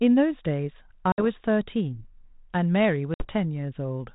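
Speech with two bursts of packet loss on an ADPCM call, at 1.12 to 1.23 s and 3.14 to 3.28 s. Each hard silent hole is about 60 ms, roughly three packets. Unlike a plain dropout, the sound returns slightly distorted while the decoder's predictor and step size resynchronise.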